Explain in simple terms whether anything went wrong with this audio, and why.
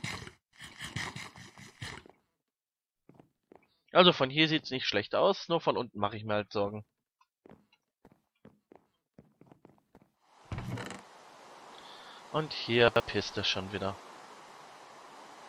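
A brief jumbled stutter at 12.88–13.0 s and again at 14.64–14.72 s comes from chunks out of order: small 40 ms pieces of audio played one or two slots late.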